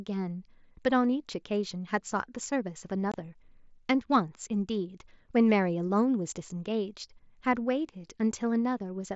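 At 3.12 to 3.14 s there's unconcealed Bluetooth headset packet loss: about 22 ms of speech, likely three dropped mSBC frames, simply vanishes, leaving an abrupt hole.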